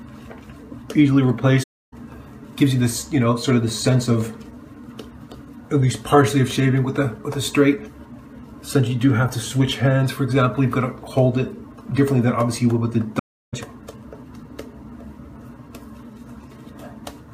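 Two soft-edged dropouts interrupt the audio, both typical of AAC frame loss with muting. The first runs from 1.63 to 1.94 s, about 0.3 s of silence, which fits roughly 14 lost frames. The second, from 13.19 to 13.54 s, lasts about 0.34 s, consistent with around 16 frames. The decoder zeroed the missing spectra, so the overlapping windows fade the sound out and back in.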